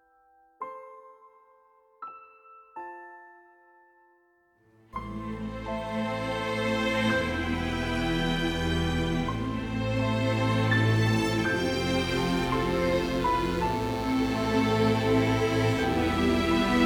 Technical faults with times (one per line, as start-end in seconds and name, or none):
12.08-16.86 mains buzz